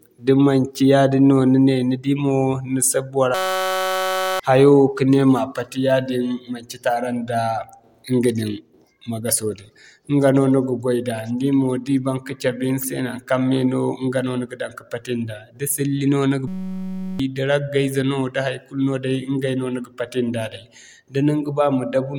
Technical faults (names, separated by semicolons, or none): system hang loop